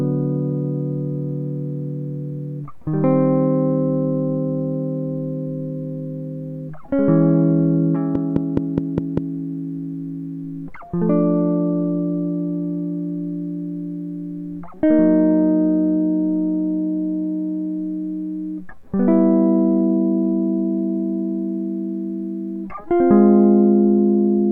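A likely cause is interference from nearby equipment or a faulty connection injecting pulses: from 8.15 to 9.18 s a train of clicks, about seven evenly spaced ticks at roughly 4.9 per second, pops over the music, some 15 dB louder than it.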